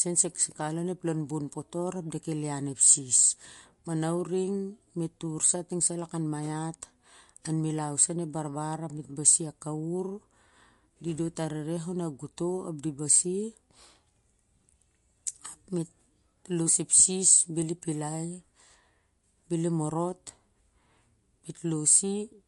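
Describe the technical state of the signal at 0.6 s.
At 0.6 s, as throughout the clip, the speech stops at 11.2 kHz and has a plainly audible watery swirl. The likely cause is MP3 compression at a low bitrate, dropping weak frequency lines frame to frame. A plain low-pass filter would dull the top without that swirl.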